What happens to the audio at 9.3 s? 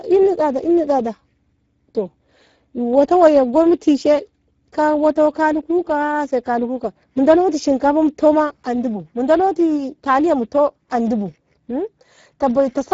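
Speex codec damage is present at 9.3 s, as throughout the clip. The CELP coder, at a low bitrate around 10 kbps, starves the excitation, leaving speech hoarse and noisy, with nothing above 7.7 kHz.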